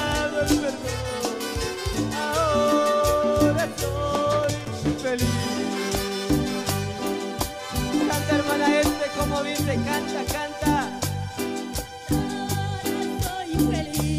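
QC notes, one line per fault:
4.43–4.68 s, loose connector crackle: a worn or dirty contact in the signal path loses and regains contact rapidly as it shifts, chopping the signal on and off, so a quarter-second burst of irregular, scratchy crackle cuts across the sound.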